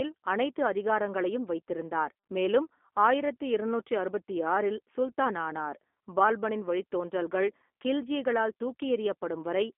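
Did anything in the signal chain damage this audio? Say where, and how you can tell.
Yes. The damage happened at the codec stage: the speech went through a G.729 codec, the low-rate CELP type used in VoIP, for the whole clip. The line is confined to about 250 Hz to 3.5 kHz, with nothing above. The voice has a rough, slightly synthetic edge, plainly audible throughout, because each frame is rebuilt from a vocal-tract filter, a pitch predictor and a few coded pulses. That fits an 8 kbit/s G.729A encode.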